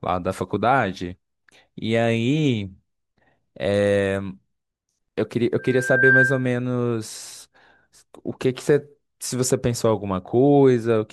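From 5.58 to 6.52 s, a microphone picked up its own loudspeaker and the loop gain passed unity at 1.6 kHz, causing loudspeaker feedback squeal. A pure tone swells over about half a second into a squeal a few decibels louder than the speech.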